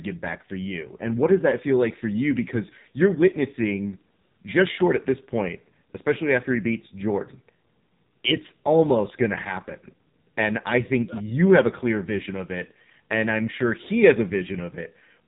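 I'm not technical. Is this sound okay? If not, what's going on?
No. Throughout the clip, the speech has gone through the AMR narrowband mobile codec, the old phone-network compressor, squeezed hard. Nothing above about 3.8 kHz survives, so the voice sounds thin and muffled, and the heavy compression makes it buzzy and artificial.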